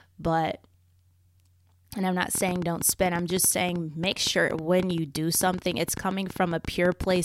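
Speech, with a train of clicks starting at 2.35 s, just after "and I'm not", and running to 7.17 s. Roughly fifty similar clicks arrive unevenly at about 9.4 per second, peaking around 5 dB above the signal, audible over pauses too, likely from nearby equipment interference or a faulty connection or power supply.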